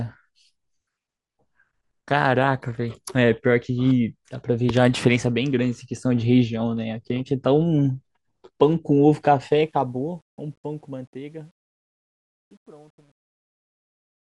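From 9.51 s the speech fade-out shows truncation distortion on a fade, consistent with about 10-bit undithered steps, turning gritty from 11.19 to 14.37 s rather than staying smooth like a clean fade.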